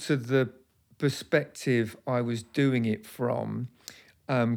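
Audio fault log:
No faults are present in this speech recording. Nothing in it calls for a timed entry in the log.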